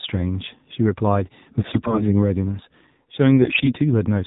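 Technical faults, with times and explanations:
Throughout: AMR narrowband mobile codec. The speech sounds thin, buzzy and somewhat synthetic, with nothing above 4 kHz. This comes from the mobile codec's vocal-tract model, which is fed only a few pulses per subframe. The plainly audible damage fits a low mode of about 7.4 kbps.
1.60–2.06 s and 3.42–3.73 s: AMR bit errors. The voice keeps roughly its pitch and level but turns hoarse, scratchy and gargly, and the second stretch sounds rougher. Flipped low-priority bits misplace the excitation pulses and skew the gain and spectrum values, at roughly a tenth and then a fifth of the bits.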